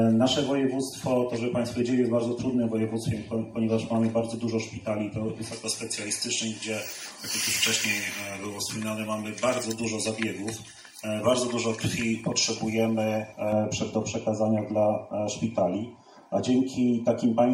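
From 5.52 s to 13.52 s, pre-emphasis is left on: the treble lift applied for transmission never gets its matching de-emphasis, a shape that fits a J.17 curve. Around 10 kHz the top end sits about 11 dB above 1 kHz, so the sound turns thin, bright and harshly sibilant.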